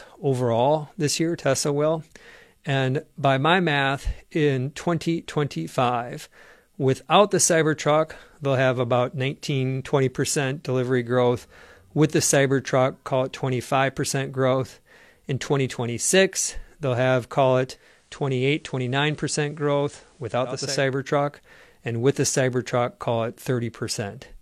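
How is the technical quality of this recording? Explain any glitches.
One glitch stands out. From 17.67 to 20.86 s, just after "they'll have call", there is a digital radio blend to analogue: the receiver lost its digital stream and cross-faded over about half a second to the station's FM signal. Hiss rises to around 35 dB below the signal, and level dips about 2 dB. That hiss, rather than silence or warbly codec artefacts, distinguishes it from a dropout.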